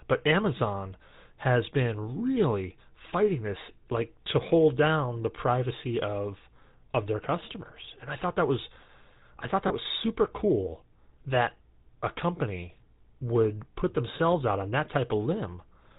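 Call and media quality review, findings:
GSM full-rate codec, whole clip: buzzy, gravelly roughness on speech, hard cut above 4 kHz. Spectrogram shows an empty band above 4 kHz and smeared, pulse-driven harmonics. Vocal-tract model with coarse excitation, which fits a 13 kbps full-rate stream.

Lost GSM frames, 9.68–9.72 s: brief rough, metallic ring held over the gap. The waveform shows a short stretch with no new detail. The decoder replayed the last good frame's settings, consistent with one lost 20 ms frame.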